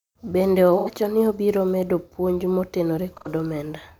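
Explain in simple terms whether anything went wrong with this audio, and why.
Yes, a couple of things went wrong. Around 0.78 to 0.89 s and again at 3.17 to 3.28 s there's AAC frame loss with concealment: a brief smeared, noisy patch where the decoder guessed the missing audio, which fits about two lost frames each time. From about 0.99 s to 3.0 s there's a click roughly once a second, about three in all, likely clock drift buffer slips where two devices' clocks disagree and a few samples get dropped or repeated.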